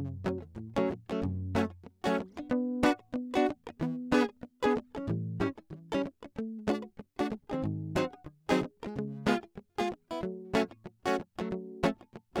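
The music carries no audible technical faults at any point.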